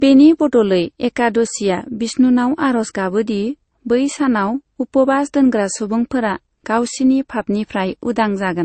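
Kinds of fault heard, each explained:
Transcoding between lossy codecs: likely an MP3 pass at 35 kbit/s then Opus at 48 kbit/s. Nothing above 8.5 kHz, and two distinct artefact textures overlap, unlike one codec's artefacts alone.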